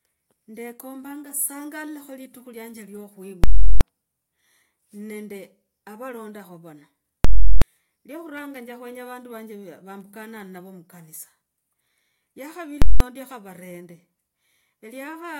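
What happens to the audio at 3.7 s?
A very loud pop at 3.44 s, then no sound until a second pop at 3.81 s. This is invalid numbers at full scale: a calculation went infinite or invalid, pinning the output flat at one extreme value for a 0.37 s block, which fits a 16384-sample block.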